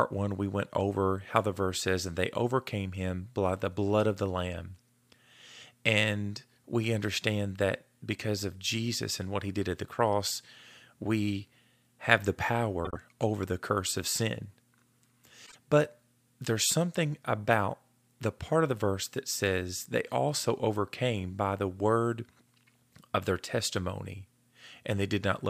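Around 12.85 to 12.97 s, and again at 15.46 to 15.56 s, there's frames out of order: two neighbouring blocks of frames got swapped, so each short stretch plays back-to-front in halves. You hear a brief garbled flutter, but no time goes missing.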